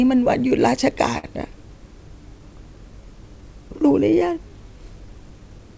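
Right from the start there's clock drift between sender and receiver: the sending end's clock runs a few percent slow, so the receiver's jitter buffer keeps drifting toward empty and the whole clip carries a faint, uneven sense of the timing being nudged along.

From 0.06 s to the end at about 5.8 s you get the repeated timing corrections that drift forces. The receiver keeps stretching tiny bits of the speech to cover the gap, playing at roughly 97% speed and adding something like a fifth of a second overall. If it comes across at all, it's as a slightly draggy, unsteady pace or slight hiccups.

Then at 1.18 to 1.25 s there's a short stall from a late packet. The buffer actually ran dry, so the receiver held the last sound for 52 ms until the data showed up, then carried on without losing anything. You hear one sound hang a touch too long with a slight buzzy dip. All of this sits on top of the call path's G.722 coding, which leaves nothing above 8 kHz.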